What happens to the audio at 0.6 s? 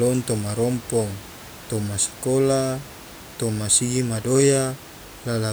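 Nothing goes wrong at 0.6 s: the speech plays through intact, with only the room's own background noise, about 19 dB below the speech, audible beneath it.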